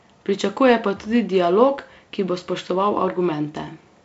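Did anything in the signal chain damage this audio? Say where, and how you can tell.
No, no damaging stage found.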